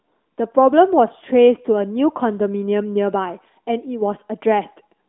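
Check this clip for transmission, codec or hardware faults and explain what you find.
I can't hear any transmission, codec or hardware faults here; it's just speech carried over what sounds like an AMR narrowband mobile codec at around 12.2 kbps, with that typical phone-line band topping out at about 3.8 kHz.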